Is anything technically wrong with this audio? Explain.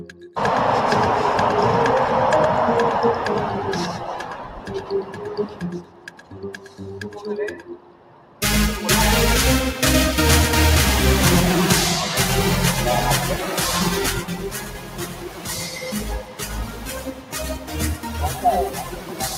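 Yes, three related faults can be heard.

Doubled audio track, throughout: a second full-band copy trails the original by roughly a tenth of a second, about 5 dB quieter. It has no room colour, so it sounds like a flat echo, likely from a slower second capture path mixed back in.

Noise suppressor applied to music or sounds, throughout: a speech-oriented suppressor treats steady tones and tails as noise and pulls them down while letting attacks through. Its gain swings by around 15 dB, so the sound pumps and thins.

Sound cut by the noise suppressor, at 0.0–0.36 s, 4.2–7.25 s, 7.54–8.42 s, 14.22–16.01 s, 16.19–17.78 s, 17.95–18.45 s and 18.69–19.37 s: here the suppressor misjudges sustained material as noise and drops it by about 10 to 11 dB, so held sound sinks and decays end early.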